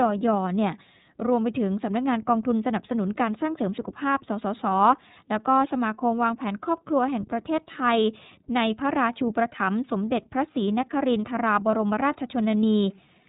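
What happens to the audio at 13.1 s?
At 13.1 s the speech carries the same iLBC codec damage heard across the whole clip, from start to finish. The coder works in independent 30 ms frames, rebuilding each frame's excitation without reference to the previous one, and the texture fits the 13.33 kbps mode. Nothing above 3.8 kHz survives, so sibilants and consonant edges are dulled, and the voice has a plainly audible rough, slightly synthetic grain.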